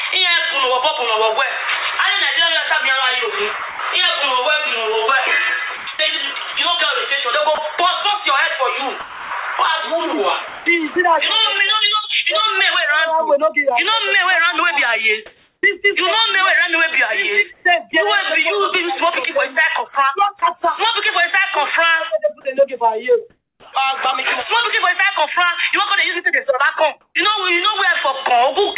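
Audio carried over a call path with nothing above 4 kHz, which fits G.711 mu-law at 64 kbps, shows several faults. From 3.59 to 10.96 s the voice detector likely switched transmission on and off repeatedly, giving sound chopped by the voice detector: about 1 s in total is swapped for comfort noise, so the sound turns choppy. Discontinuous transmission likely also produces comfort noise in place of the background. Between 15.26 and 17.65 s about 0.49 s of real background becomes flat synthetic noise. From 23.3 to 23.73 s it drops about 4 dB, with the background already about 57 dB below the loudest parts. From 27.01 to 27.15 s it jumps about 13 dB. At 19.94 s the detector likely briefly treats sound as background, so sound dropped by the voice detector leaves a 10 ms gap filled with noise. At 23.69 s the detector likely reacts late to the restart, producing an onset clipped by the voice detector: the first 40 ms are missing and the sound begins abruptly.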